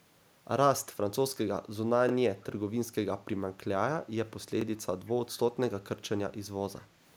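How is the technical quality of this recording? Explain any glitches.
The recording has two kinds of glitch: a pair of stutters at chunk joins and two brief traces of returned echo late in the clip.

Overlapping chunks appear at 2.09–2.11 s and again at 4.61–4.64 s, 2.5 s apart. The audio was handled in 2.5 s blocks, and each new block began about 25 ms before the previous one finished, so that 25 ms slice plays twice. It is heard as a small click or stutter. On a waveform the repeated stretch shows as a duplicated cycle pattern with a discontinuity at the seam. A spectrogram shows a thin vertical line there.

Echo leak shows up at 5.06–5.12 s and 5.31–5.38 s as faint, fragmentary copies of the speech arriving 182 ms after the original, very quiet, somewhere around 30 to 35 dB down. The likely cause is a far-end loudspeaker whose echo canceller let residual pickup slip back into the call. 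A spectrogram would show pale, smeared repeats of the preceding harmonic bands offset by 182 ms. A waveform shows only a barely raised low-level trace.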